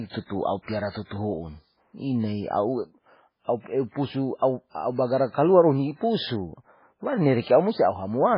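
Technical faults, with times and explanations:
Throughout, MP3 compression, heavy: the speech has nothing above 5.2 kHz and a watery, swirling texture, with s sounds turning into metallic chirps and consonant onsets smeared. This is likely a bit-starved MP3 encoder, consistent with a bitrate around 16 kbps. It discards all treble above a fixed cut-off and drops weak frequency lines that flicker between frames. A spectrogram shows a hard flat ceiling at 5.2 kHz with speckled, patchy holes below it.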